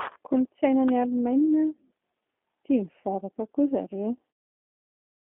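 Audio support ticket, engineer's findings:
Low-rate speech codec on the call path, whole clip, consistent with G.729 at 8 kbit/s. Frame-by-frame rebuild from vocal-tract filter, pitch predictor and sparse pulses; band limited to roughly 250 Hz to 3.6 kHz. Result: thin, boxy tone, no top end, plainly audible rough, synthetic grain on speech. End-of-clip fade-out, about 4.3 s to 4.5 s, smooth and clean.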